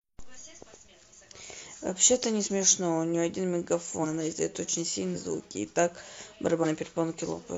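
Compressed frames are skipped at 0.33, 2.42, 4.00, 5.11 and 6.60 s. Each time, the speech jumps forward by roughly one to three frames (about 50 to 150 ms). The step size fits 46 ms frames.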